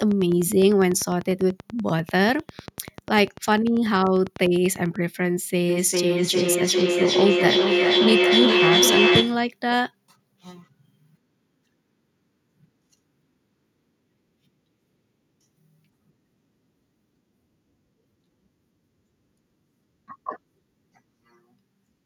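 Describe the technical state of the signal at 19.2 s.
At 19.2 s the speech signal is intact, with no audible fault at that moment.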